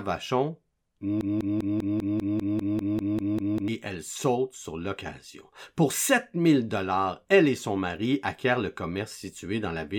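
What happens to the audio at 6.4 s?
Nothing goes wrong at 6.4 s; the speech carries on intact through that moment, with no dropout, click or other fault to be heard.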